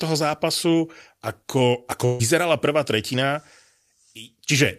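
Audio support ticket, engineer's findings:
Speech held as a buzz or faint hiss, fading out, 2.05 to 2.21 s; resumes with about 140 ms of speech missing. Burst of packet loss in the network path. Receiver's concealment extended the last audio for about 141 ms and faded it, then playback jumped ahead past the lost stretch.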